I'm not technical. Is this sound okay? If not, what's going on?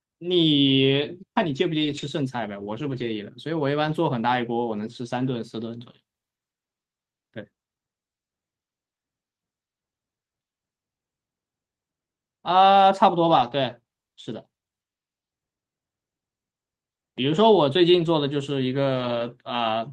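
No, not quite. It's speech sent over a call, and at 1.81 to 2.03 s, 2.91 to 3.05 s, 3.87 to 3.93 s, 7.39 s, 13.27 to 13.53 s, 17.93 to 18.07 s and 18.95 to 19.21 s you get a lost packet rebuilt from error correction. Bits of audio went missing on the way, and the next chunk carried a rough backup copy that got played instead. So there's no silence, just brief grainy, noisier patches, the longest lasting about 140 ms.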